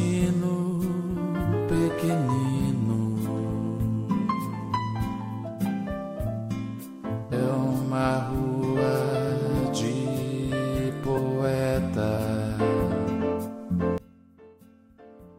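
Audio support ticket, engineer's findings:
Compressed frames skipped at 7.31 s, 11.17–11.19 s and 12.16 s: sound jumps ahead roughly 300, 200 and 150 ms, pointing to several lost decoder frames.

13.98 s to end: level drops about 25 dB, centre content mostly gone. Likely one channel inverted, cancelling on mono sum. Spectrogram thins abruptly.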